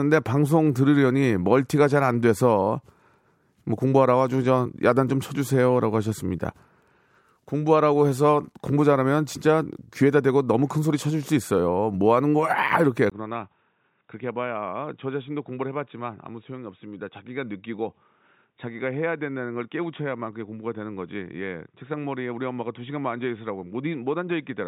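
Input switched to a poorer device, from 13.10 s to the end: after a brief silence of about 20 ms, the speech turns dull and boxy, with nothing above 3.8 kHz, drops roughly 10 dB in level, and gains a new background noise floor sitting well below the voice. The likely cause is the system changing its input mid-recording to a narrower-band microphone or a headset call profile, which brings its own tone, level and noise.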